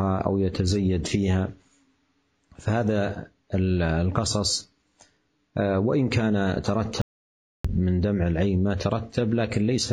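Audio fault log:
7.02–7.65 s, audio dropout to silence: sound cuts abruptly to total silence for 0.63 s and no room tone remains; likely a lost input.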